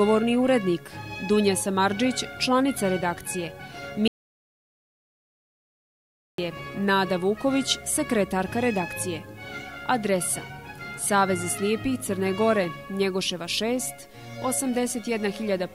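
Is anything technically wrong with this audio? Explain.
Yes. Audio dropout to silence from 4.08 to 6.38 s: input was likely lost while recording continued, so sound cuts to silence with no room tone for about 2.3 seconds.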